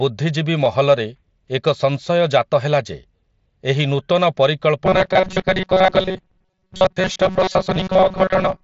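Voice packets from the Bluetooth headset were lost at 0.65 s, about 7.5 ms, and the receiver patched the gap with a copy of the waveform just before. This concealed Bluetooth headset packet loss is almost inaudible. A longer run of about 22.5 ms lost at 3.43 to 3.45 s, right after "ହେଲା ଯେ", becomes a brief buzzy tone at full level with a slight warble as real audio resumes, over the light grain of the mSBC wideband headset link.

From 4.85 s to the end, new audio likely arrived too rarely and the software repeated a roughly 5 ms buffer, skipping most of the real sound. This robotic sound from repeated short buffers imposes a rigid 188 Hz metallic buzz.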